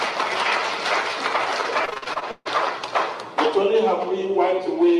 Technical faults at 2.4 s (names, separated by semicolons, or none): repeated packet loss (robotic sound)